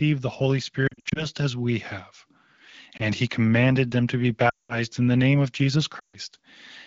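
Radio errors corrupted speech frames so they failed their checksum, and the AMR-WB decoder concealed each gap by repeating the last good pitch and vocal tract settings at falling gain. These lost AMR speech frames appear first at 0.87 to 1.26 s, where about 180 ms goes missing in short bursts of up to 60 ms, giving a stuttering warble. At 2.97 s a single frame drops as a brief dip. At 4.49 to 4.78 s a longer 200 ms loss fades the sound out quickly, as wideband concealment does, and 5.99 to 6.16 s does the same over 140 ms. Each time the speech returns weak or rough, against the light coloring of the wideband codec.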